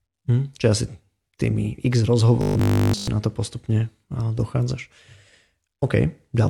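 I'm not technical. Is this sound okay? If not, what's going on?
No. From about 2.42 to 3.14 seconds there's robotic sound from repeated short buffers. The likely cause is new audio reaching the playback software too slowly, so it kept replaying the last tiny scrap, about 20 milliseconds, instead of waiting, and most of that stretch is filled with repeats. That repetition forces a fixed 50 Hz hum onto the speech, making it a stiff, metallic buzz until just before "to postupne dochádzaš".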